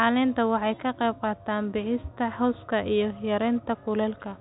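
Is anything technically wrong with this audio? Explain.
No, the speech carries the expected telephone-band character of G.711 coding, with nothing above about 3.8 kHz and at most a faint level-following quantisation hiss, and no faults are audible.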